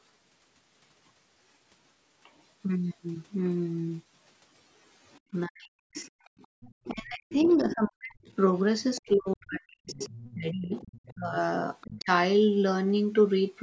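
At 5.32 to 5.96 s the talker's speech sinks by roughly 40 dB in patches, likely speech suppressed in double talk: with both sides talking at once, the echo canceller can't tell the talker from the loudspeaker echo, so it turns everything down. The same chopped-out dipping returns from 6.9 to 8.28 s and, longest, across 9.0 to 12.09 s.

Right after, from 5.96 to 8.35 s, a second voice sits about 15 dB under the talker. That's likely the other side's voice leaking through: the canceller didn't scrub all the loudspeaker playback from the mic. It leaks again, about 20 dB down, at 8.96 to 11.15 s and briefly at 11.81 to 12.04 s.

From 6.29 to 6.61 s the room sound drops out by about 39 dB for a moment. That's background gated by the echo canceller, which clamps the mic hard while the loudspeaker plays and then lets go.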